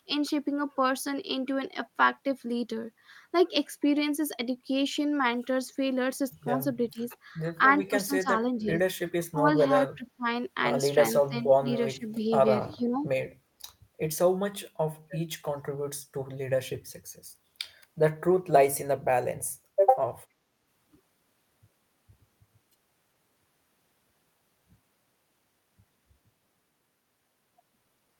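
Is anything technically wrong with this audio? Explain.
Yes. The speech is pushed down in five places: 6.92–7.11 s, 7.89–8.87 s, 9.32–10.26 s, 11.27–12.21 s and 12.76–13.04 s. The level dips by roughly 10 to 20 dB, and the deepest drop is near 8 s. Within each stretch, parts of the sound fall away in pieces. This is likely speech suppressed in double talk. An echo canceller heard both ends at once. It could not tell this talker from loudspeaker echo, so it turned the line down.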